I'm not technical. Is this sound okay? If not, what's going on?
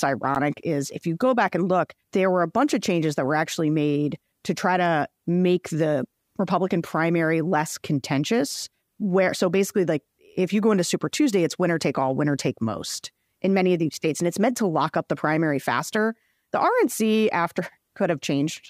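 No. There are two blocks of digital silence, at 0.35 s just before "is if you go" and at 13.93 s after "in many of these." The sound drops out abruptly, leaving a brief tick or dip.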